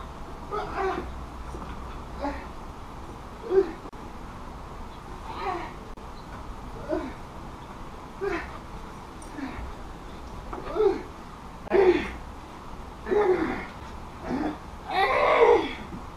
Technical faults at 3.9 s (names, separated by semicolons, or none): gap at a join of encoded pieces